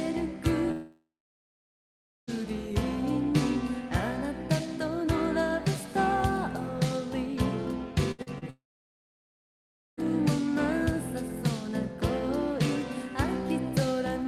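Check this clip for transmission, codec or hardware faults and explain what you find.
Two long gaps and a cluster of shorter losses point to transmission faults in the network path.

Long network dropout, 0.71 to 2.30 s and 8.50 to 10.00 s: in each, the last sound is carried on briefly as a fading buzz or hiss, then gives way to silence for about 1.2 s in the first case and about 1.38 s in the second. The audio resumes further on, with roughly 1.56 s and 1.48 s of material gone. The likely cause is a stall in packet delivery long enough that the receiver's concealment ran out and muted.

Burst of packet loss, 8.11 to 8.21 s: about 80 ms of audio failed to arrive in time. The receiver extended the preceding sound for about 70 ms while steadily lowering its level, so it comes across as a short held buzz or hiss that decays before playback picks up at a later point, with the intervening audio missing.

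Short concealed packet loss, 8.22 to 8.29 s and 8.38 to 8.44 s: each hole is about 40 ms. The decoder bridged them by continuing the prior waveform, pitched or noise-like depending on the sound, then crossfading into the real signal. The result is a brief smear or wobble rather than an obvious gap. Coming right after the burst and just before the second dropout, these losses cluster around 8 to 10 s.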